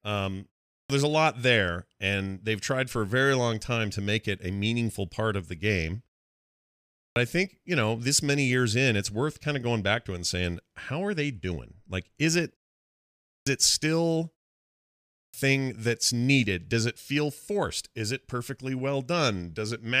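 An output device dozing in silence and waking late causes a clipped start after a pause at 0.76, 7.0, 13.33 and 15.2 s. Roughly 0.14 to 0.16 s of speech is lost each time, so "there's a lot there", "it still" and "that's needed" begin abruptly.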